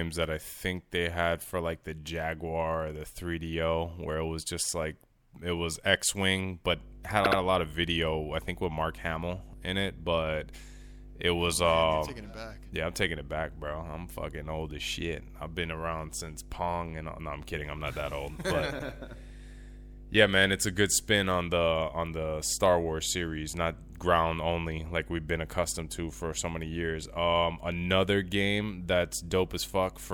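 From 6.70 s to the end, a steady low tone sits under the speech at 50 Hz, around 15 dB below it. This is mains hum, where a ground loop or nearby transformer leaks the power-line frequency into the signal path.

At 7.24 s the audio stutters, with the same 72 ms fragment heard three times in a row. At 18.78 s a 96 ms fragment plays twice. These are repeated frames: a short run of compressed frames was decoded again, adding 144 ms and 96 ms to the clip.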